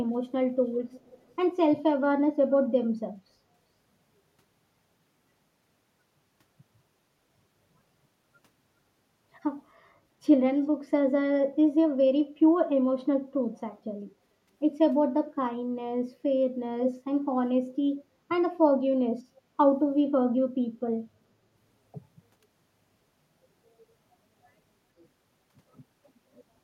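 A speech recording with echo leak: on the far side the call was likely played over a loudspeaker, and the echo canceller failed to remove what the microphone picked back up, so a delayed copy of the speech returns. From 0.86 to 1.35 s a faint echo trails about 400 ms behind, well below the speech. At 16.84 to 16.92 s a brief scrap arrives about 420 ms late, nearly as loud as the speech itself.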